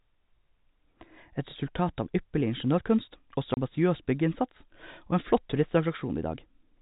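A single packet of this telephone-band speech was lost in transit and replaced with silence, leaving a 30 ms hole from 3.54 to 3.57 s, which fits one missing packet. Its edges are hard. The G.711 telephone coding beneath it caps the band at 4 kHz.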